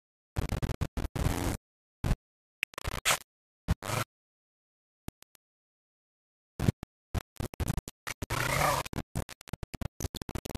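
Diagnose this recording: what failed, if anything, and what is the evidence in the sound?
The whole clip is coarse and grainy, with distortion that rises and falls with the sound and an error almost as loud as the signal. This points to low bit depth without dither, likely from rounding to about 4 bits during sample-format conversion. Unlike hiss, the grit stops whenever the sound does.

Two brief blips at 1.51 s and 9.73 s come from damaged data in a compressed stream in storage or transmission. The decoder misreads corrupted frames and resyncs on the next header. Each is a short glitch in the sound.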